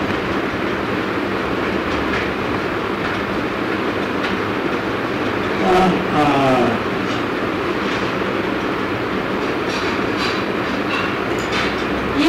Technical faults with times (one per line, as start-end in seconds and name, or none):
0.00-12.29 hard clipping